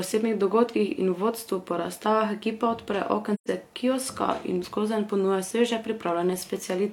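Speech with one AAC frame loss with muting: after "po razstavah ekipa odpre", 3.34 to 3.48 s falls silent until "kioska in skozenj ponuja", a gap that fits about three lost frames. Overlapping windows fade both edges, so unlike a hard dropout the hole is soft-edged.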